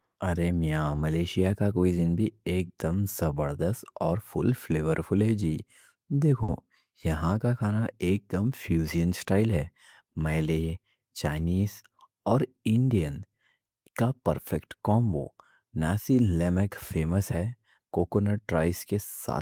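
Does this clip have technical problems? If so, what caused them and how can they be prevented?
Yes. At 6.43 to 6.50 s there is a short stall from a late packet. A packet missed its playout time, so the jitter buffer ran dry and the receiver stretched the last sound by 50 ms. Playback then resumed where it left off, with nothing lost but a held sound with a slight buzz or dip. A deeper adaptive jitter buffer would absorb late arrivals of this size without running empty.

From 11.10 to 11.45 s there is a jitter buffer speed-up. The buffer was fuller than its target, so the receiver cut pitch-period pieces in quick succession, about 50 ms in total. The speech runs at 110% speed with unchanged pitch and sounds briefly hurried. Smoother network delivery, or a slower, gentler buffer-shrinking policy, would avoid such a noticeable catch-up.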